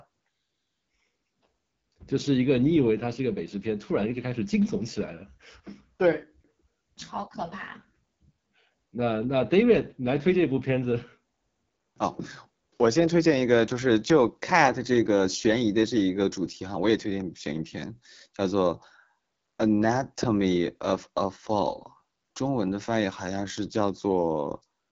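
It's a speech recording run through the AMR wideband (HD Voice) codec for its whole length, and the damage is plainly audible: rough, raspy voicing and nothing above 7.6 kHz. That grittiness fits one of AMR-WB's lowest modes, around 8.85 kbit/s.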